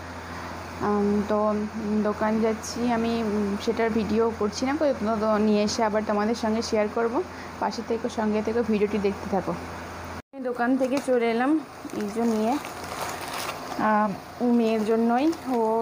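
No technical faults can be heard anywhere in the recording. Nothing interrupts or distorts the sound at any point.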